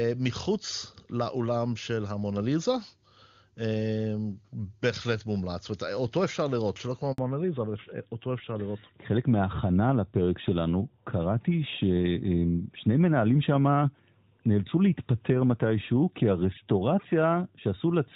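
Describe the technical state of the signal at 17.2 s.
At 17.2 s the call is in a fallback to narrowband, running from 7.18 s to the end. The codec has dropped from wideband to narrowband, likely AMR-NB. Nothing above 4 kHz remains, so the speech sounds duller and rougher.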